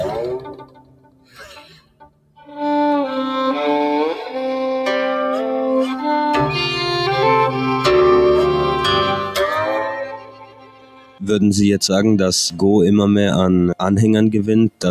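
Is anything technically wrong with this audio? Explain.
Yes. A noise suppressor applied to music or sounds runs throughout, treating steady tones and tails as noise; levels swing by around 20 dB, so the sound pumps, unlike a compressor that follows loudness.

Sound cut by the noise suppressor occurs from 0.4 to 2.51 s and 9.89 to 11.22 s, with drops of about 18 dB. Sustained sound sinks while attacks survive.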